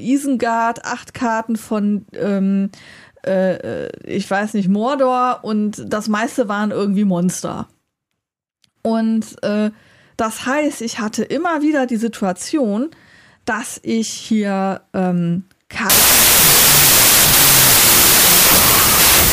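From 15.90 s, right after "dass ich hier ähm", to the end at 19.32 s, a wrong sample width turns the speech into loud noise. The slowed, lowered remnant at 0.667× speed, which fits 24-bit data read as 16-bit, distinguishes it from a byte-order swap.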